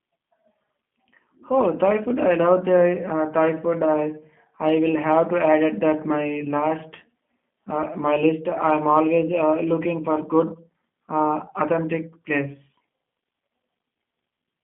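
From start to finish the speech carries plainly audible G.729 codec damage, and the roughness fits the 8 kbit/s G.729A variant. Each 10 ms frame is rebuilt from a vocal tract filter, a pitch predictor and a few pulses, so voices sound slightly buzzy and synthetic. A spectrogram shows energy confined to roughly 150 Hz to 3.4 kHz, a hard ceiling with nothing above, and smeared, blocky harmonics.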